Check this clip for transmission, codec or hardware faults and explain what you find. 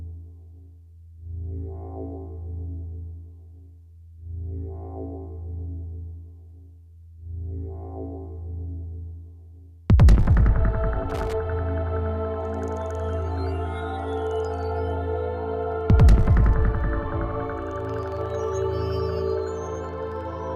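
There is one hardware fault. From 11.10 to 11.33 s, loose connector crackle: a worn or dirty contact rapidly makes and breaks, chopping the signal into an irregular scratchy burst. Unlike regularly spaced digital clicks, its crackles come randomly clustered within that quarter second.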